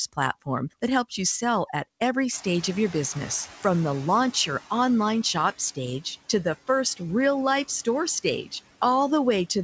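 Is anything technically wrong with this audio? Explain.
Yes. Noise suppressor artifacts run through the whole speech clip. The suppressor pulls steady background down by about 14 dB frame by frame. That leaves the noise sinking between words and rising under them, and a spectrogram shows patchy, flickering gaps in the noise floor.

From 2.32 to 4.32 s, after "you sell at every" and before "your online shop stage", the room noise jumps by about 21 dB. The noise suppressor is catching up. Its estimate lags, so the louder noise gets only about 9 dB of cut and then sinks over two seconds. The waveform shows a raised floor that tapers. The call path, which fits a G.722 codec, leaves nothing above 8 kHz.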